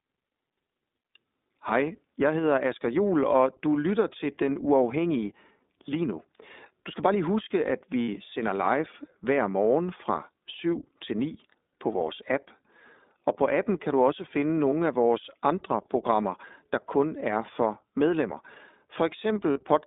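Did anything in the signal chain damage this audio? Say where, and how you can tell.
Yes. The damage starts at the codec stage. The whole clip passes through the iLBC codec, a narrowband VoIP coder. The speech sits in a band from about 250 Hz to 3.7 kHz, with nothing above it. The roughness and synthetic edge are plainly audible. The coder rebuilds the excitation frame by frame with a 20 ms frame, which points to its 15.2 kbps mode. That coarse rebuilding causes the grain.

The network stage adds lost iLBC frames at three points. The first runs from 8.02 to 8.08 s, after "bare lige huske at", which fits three missing 20 ms frames. The second runs from 14.70 to 14.73 s, between "kan du også finde" and "af vores andre programmer", which fits one missing frame. The third runs from 19.52 to 19.58 s, which fits two missing frames. Each gap sounds like a held, buzzy vowel. The decoder repeats the last pitch cycle mixed with noise. 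Clean speech returns at once because each frame decodes alone.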